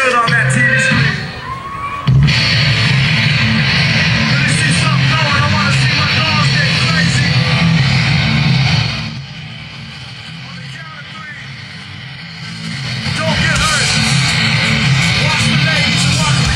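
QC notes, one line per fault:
8.78–9.25 s and 12.32–13.46 s, zipper noise: the level drops by about 15 dB, then rises by about 15 dB, in 3 dB steps, at about ten and then five steps per second. Each unsmoothed jump clicks, so the move ticks. The waveform envelope shows a staircase, and the spectrogram shows thin vertical broadband lines at each step.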